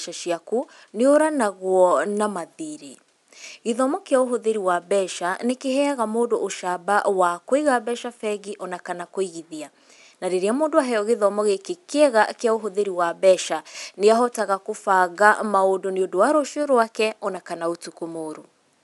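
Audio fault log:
Nothing stood out on listening to this speech, and the faint room noise sits about 46 dB below the talking.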